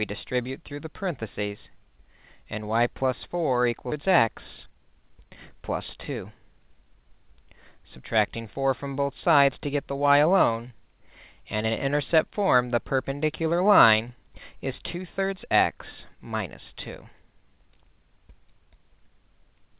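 At 3.92 to 3.94 s the audio makes a skip ahead: about 0.7 s of sound is simply gone, with no fill, and the material on either side is butted together. The ear hears an abrupt jump forward with no pause. On a waveform the envelope changes shape instantly at the join, and a spectrogram shows a hard vertical seam where the patterns before and after fail to line up, all under the flat ceiling at 4 kHz left by the G.711 call codec.

Right after, the jitter buffer speed-up begins, from 4.08 to 5.57 s at 116% speed and again from 5.98 to 7.10 s at 107%. The receiver, holding more audio than it wanted, trimmed out short pitch-period-sized slices again and again, about 0.2 s in the first stretch and about 0.1 s in the second. The pitch stays put but the sound feels rushed, most clearly in the first stretch. A spectrogram shows harmonics at unchanged height while events arrive compressed in time. 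A waveform shows full-length cycles with whole ones missing, spliced together without visible gaps.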